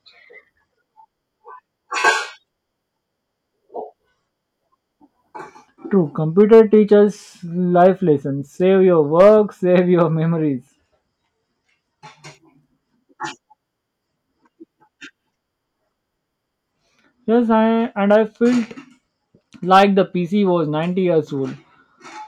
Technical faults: hard clipping

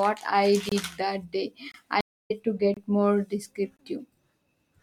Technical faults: gap between chunks; stream reconnect

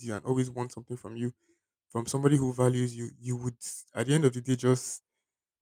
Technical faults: none

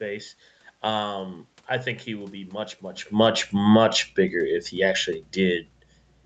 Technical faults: automatic gain falling

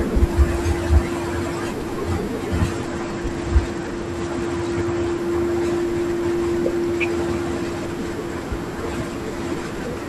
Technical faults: Bluetooth SBC bit pool drop

